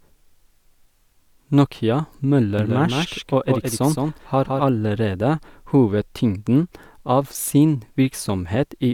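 From 2.59 to 4.63 s the speech has a doubled audio track: a flat copy roughly 150 ms behind, about 5 dB quieter, likely from a second capture path. Unlike an echo, it neither decays nor colours, and it starts and stops abruptly.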